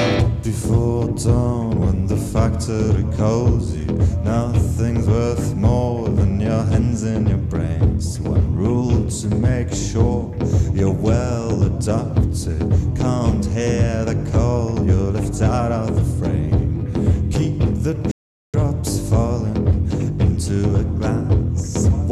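At 18.11 s the sound drops into silence and stays there until 18.54 s. This is a rebuffering stall. The player used up the audio it had already downloaded and had to wait for more to arrive. Playback then picks up at exactly the point where it stopped. Nothing is skipped or repeated. The only effect is a gap of about 0.42 s in the timeline, heard as an abrupt pause and a clean restart.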